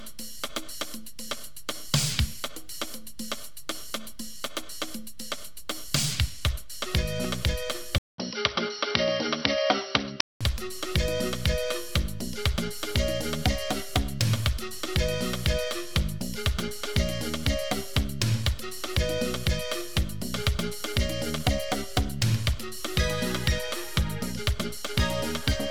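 At 7.25 to 7.27 s a single loud pop, likely a voltage spike from a plug, switch or static discharge, lands on top of the sound, peaking around 10 dB above it. On a waveform it is a tall, narrow spike; on a spectrogram, a thin vertical stripe spanning every frequency.

From 7.98 to 10.41 s the input seems to have been switched to a poorer device, likely a lesser microphone or headset profile. A 200 ms gap marks the switch, and then the sound turns dull at much the same level. A spectrogram shows a hard ceiling at 5.8 kHz and a faint new noise floor some 50 dB down.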